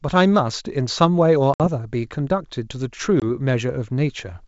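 Packet loss on an ADPCM call disrupts this speech clip, which is carried over G.722 wideband telephone coding whose full 7 kHz range fits the 64 kbit/s mode. At 1.54 to 1.65 s about three packets' worth of audio, 60 ms, were lost, and at 3.20 to 3.25 s roughly one packet, 20 ms, went missing. Each loss becomes a hard-edged silent hole. The decoder's adaptive predictor and step size then no longer match the sender's, so the sound returns with brief, slight distortion before settling.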